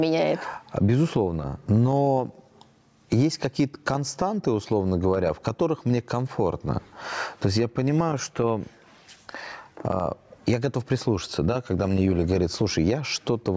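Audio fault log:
throughout: gain pumping; the gain ducks about 20 dB under loud sounds, likely excess gain plus fast limiting; waveform squashed.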